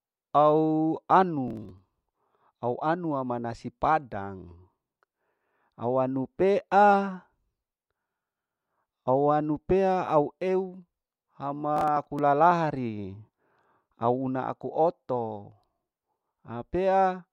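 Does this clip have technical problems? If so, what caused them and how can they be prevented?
Yes: processor overload crackle, from 1.48 to 2.17 s and again from 11.77 to 12.19 s. In both stretches the processor repeatedly failed to finish its audio buffers on time, and each late buffer was skipped, leaving a tiny hole with hard edges. The rapid clicking fits a very short buffer of around a millisecond and a half. On a waveform these bursts show as dense tiny dropouts and sharp discontinuities; on a spectrogram they appear as clusters of thin vertical broadband streaks. Prevent it by raising the buffer size and reducing competing CPU load during recording.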